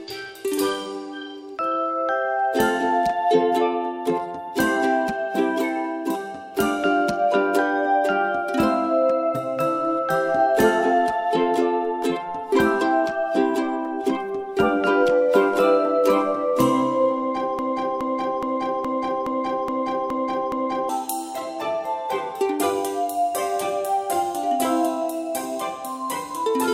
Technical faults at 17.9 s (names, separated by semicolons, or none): broken-record loop